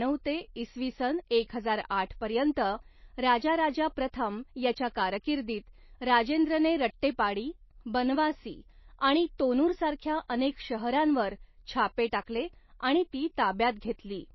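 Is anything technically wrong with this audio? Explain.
Yes, throughout the speech there's a hard treble cut at 5.8 kHz, with watery, swirly smearing, likely MP3 compression starved of bits, which fits a low bitrate around 24 kbps.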